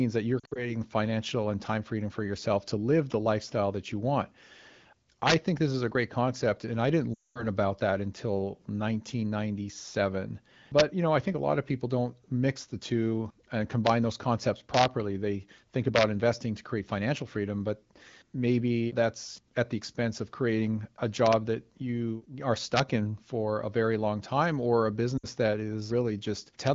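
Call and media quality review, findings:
Lost AMR speech frames: radio errors failed frame checksums; the decoder concealed them by repeating the last pitch and vocal tract settings at falling gain. Brief warbles and dropouts at 0.40–0.75 s (about 120 ms lost in scattered bursts), 7.13–7.46 s (220 ms, fading toward silence), 25.17–25.26 s (60 ms).

Integer overflow: a gain or sum stage wrapped past the integer limit instead of saturating, so peaks flip sign. Harsh cracks at 5.27–5.34 s (about 6 dB over), 10.79 s, 13.87–13.90 s, 14.74–14.85 s (about 1 dB), 15.96–16.03 s, 22.77–22.80 s (about 2 dB), 26.67 s (about 0 dB).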